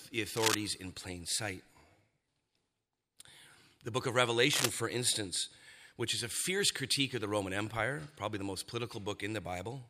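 At 0.35 to 0.55 s, just before "in plain sight", a dense, uneven burst of scratching noise sits over the speech at roughly the same loudness. It returns between "book of" and "for instance which is", from 4.53 to 4.70 s. Both bursts are cable scratch noise, likely from a worn cable or connector being moved so that its contact resistance fluctuated rapidly while the signal passed through.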